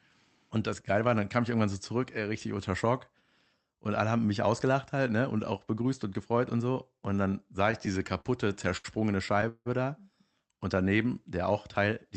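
Between 7.71 and 8.86 s there are repeated stalls (stutter). The jitter buffer ran dry twelve times, and each gap up to 74 ms was filled by continuing the preceding sound, about 219 ms in all, roughly a fifth of that span. The audio drags and stutters. On a spectrogram this appears as short smeared patches that repeat the previous frame.

From 9.48 to 9.68 s the sound stops advancing. For about 174 ms it is held as a fading buzz that ends in 40 ms of silence, then picks up where it left off. The likely cause is a call audio freeze from delayed packets. The waveform shows a decaying tail and then a flat gap. The spectrogram shows horizontal streaks and then a blank column.

Throughout, the spectrogram is cut off above 8 kHz, consistent with Opus at a modest bitrate.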